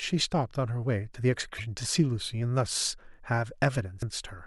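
Damaged data in a compressed stream breaks into the speech twice, at 1.56 to 1.60 s and again at 3.99 to 4.03 s, each lasting about 40 ms. At those points part of the encoded stream is corrupt, so the decoder cannot read the affected frames correctly, loses sync and has to search for the next valid frame header. The result is a brief chirp or squawk cutting across the speech.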